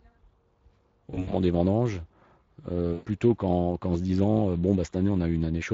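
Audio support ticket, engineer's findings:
Speex codec, whole clip: plainly audible coding damage, with hoarse, noisy speech from a starved CELP excitation, consistent with a roughly 20 kbps mode. On a spectrogram, harmonics look smeared and grainy.

VoIP packet loss concealed by the speech codec, 1.11–1.37 s before "des vendanges" and 2.93–3.05 s before "qu'en se disant euh": the decoder stretches the last pitch and filter into a tail that fades out. On a spectrogram this shows as a frozen spectrum. On the waveform the envelope decays, matching roughly 100 ms and 120 ms of lost audio.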